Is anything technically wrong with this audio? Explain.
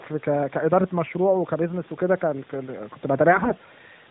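Yes. From 3.32 to 3.54 s the speech is hit by AMR bit errors, a stretch that fits roughly ten 20 ms codec frames. A few percent of the weakly protected bits flipped while the core bits still checked out, so the decoder misplaced its excitation pulses and misread the finer pitch, gain and spectral values. The speech holds its rough pitch and level but turns hoarse and gargly. On a spectrogram, harmonics blur into ragged noise below the codec's 4 kHz ceiling; the waveform shows irregular, spiky cycles.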